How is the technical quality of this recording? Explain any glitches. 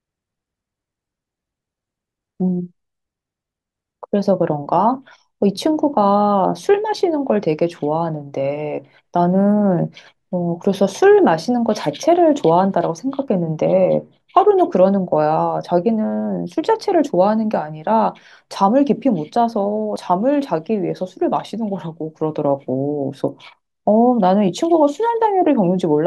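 Two glitches stand out, at 13.28 s and 19.96 s. Each is a sudden jump in the speech, as if around 40 ms of sound were cut out and the edges butted together. There is no gap of silence. The sound simply skips forward. The likely cause is a dropped buffer (overrun). The software failed to collect a block of samples before the hardware overwrote it, so that block was lost and the recording resumed further on.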